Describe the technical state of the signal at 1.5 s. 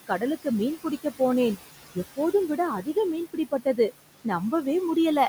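Noise suppressor artifacts are present at 1.5 s, as they are throughout the clip: the suppressor pulls down bands it judges to be steady noise by about 16 dB, so the room noise, sitting about 15 dB below the speech, dips and swells.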